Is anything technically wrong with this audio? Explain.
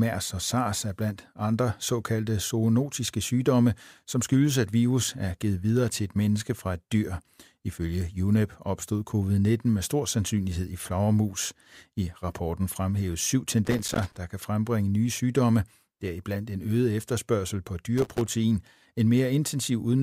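Yes. Two bursts of loose connector crackle break into the speech, from 13.65 to 14.17 s and from 17.98 to 18.28 s. A worn or dirty contact in the signal path is making and breaking as it shifts, so the audio is chopped on and off in rapid, uneven steps, and any DC on the line turns each break into a pop. The result is an irregular scratching crackle lasting about half a second the first time and about a third of a second the second.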